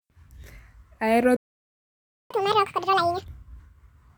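Speech that cuts to silence from 1.36 to 2.31 s, a gap of about 0.94 s: a playback stall, most likely the player running out of data or being blocked. When the sound resumes at 2.31 s it plays at double speed, raised by about ten semitones, until 3.24 s. This is catch-up at higher speed, with the player resampling its backlog to recover the lost time.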